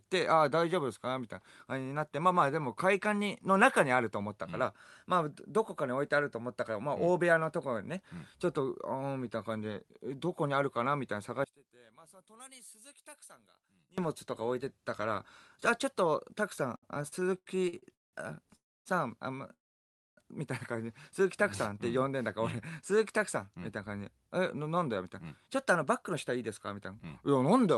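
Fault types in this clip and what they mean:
One channel inverted: From 11.44 to 13.98 s the speech collapses to a faint, hollow remnant, about 24 dB quieter, with centred voice and low end nearly gone. This is likely one stereo channel flipped in polarity, so the shared content cancels in mono.
Repeated stalls (stutter): Between 16.75 and 18.15 s the speech drags and hiccups through 16 brief hangs totalling 556 ms, the longest 186 ms, about 40% of that stretch. The jitter buffer kept emptying and the receiver stretched the last sound each time, losing nothing.
Call audio freeze: At 18.55 to 18.87 s and 19.53 to 20.19 s the speech halts, a short tail fades into near-silence of about 270 ms and 610 ms, then resumes where it stopped. The likely cause is held-up packets draining the jitter buffer, inserting 300 and 636 ms gaps.
Jitter buffer slow-down: From 21.69 to 23.19 s the speech runs at about 94% speed with unchanged pitch, syllables slightly drawn out. 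To rebuild its reserve, the receiver repeated single pitch periods over and over, adding 95 ms in all.
Jitter buffer speed-up: From 24.76 s to the end the speech sounds hurried, at about 106% speed but the same pitch. The jitter buffer held surplus audio and trimmed it by cutting short pitch-period slices repeatedly, removing roughly a fifth of a second.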